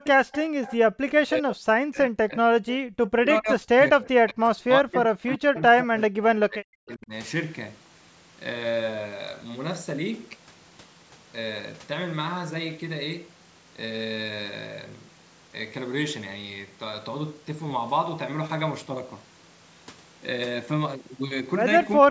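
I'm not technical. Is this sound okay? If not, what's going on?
No, there are problems. The main one is speech suppressed in double talk, from 1.11 to 2.54 s, from 3.12 to 7.13 s, and again in the last moment from 21.99 s. The voice dips, goes dull or cuts out in pieces, most likely because the other side was talking at the same time and the call's echo canceller turned both down.

There is also an echo leak from 0.32 to 0.76 s and again from 5.55 to 5.62 s. A faint second copy of the voice trails about 0.4 s behind. This is likely the other side's loudspeaker being picked up by their microphone and sent back. Unlike the cut-outs, this adds sound rather than removing it.

Briefly, from 0.78 to 0.83 s, the background is gated by the echo canceller. The room sound drops away for a blink and then comes back. It touches the room sound rather than the voice, which is what sets it apart from the longer dips in the voice.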